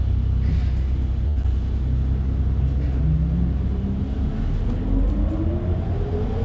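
From 1.28 to 1.38 s there is a short stall from a late packet. The jitter buffer ran dry, so the last sound is held for about 82 ms before resuming. Nothing is lost.

From 1.42 to 1.46 s comes a short concealed packet loss. About 40 ms never arrived. The receiver patched the gap by extending the preceding sound, heard as a brief smear.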